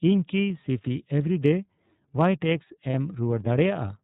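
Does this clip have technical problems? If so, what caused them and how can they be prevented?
Yes. iLBC codec damage runs throughout: the speech is squeezed into narrowband, with nothing above 4 kHz, and each frame's excitation is coded independently, which fits 30 ms frames at about 13.3 kbps, leaving a rough, synthetic edge. Prevent it by using a wideband codec.

Lost iLBC frames at 2.91 s: one 30 ms frame went missing, and the decoder filled the gap by repeating the last pitch cycle blended with noise, giving a brief buzzy, held vowel before recovering immediately. Prevent it with redundancy or better network protection.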